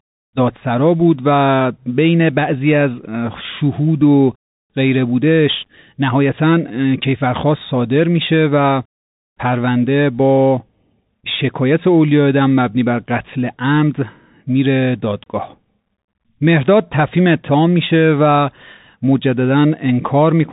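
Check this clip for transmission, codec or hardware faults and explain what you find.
Throughout the whole clip, the speech sounds boxed-in and telephone-like, with s sounds turned scratchy, louder bright passages breaking into roughness, and a fine granular hiss running beneath everything. That is the Bluetooth CVSD headset codec, which fits a 64 kbps link: each sample is a single up-or-down bit with an adapting step, so content above about 4 kHz is lost, fast-rising high energy outpaces the step, and the coarse tracking leaves grainy noise.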